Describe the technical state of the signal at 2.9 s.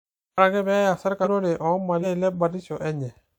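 At 2.9 s the signal is intact, with no audible technical fault at that point in the speech.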